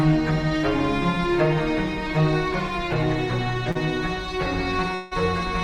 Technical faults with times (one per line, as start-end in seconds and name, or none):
3.71-3.77 short concealed packet loss
4.95-5.13 long network dropout